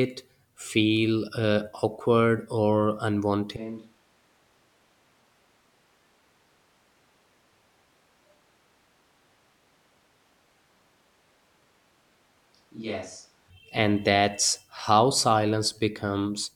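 At 3.57 s, just after "uh awkward or", the speech abruptly turns roomy and hollow, losing its low end and dropping by roughly 20 dB, while background noise rises to around 25 dB below the speech. This is a switch to a distant microphone, likely because the close microphone's signal dropped out and a farther pickup took over. At 13.5 s, just before "and that's how", the close, full sound returns just as suddenly.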